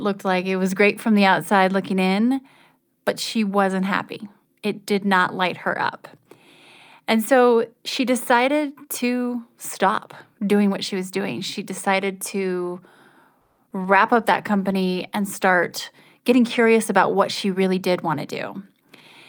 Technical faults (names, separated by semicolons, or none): call audio freeze; short concealed packet loss; call bitrate drop; jitter buffer speed-up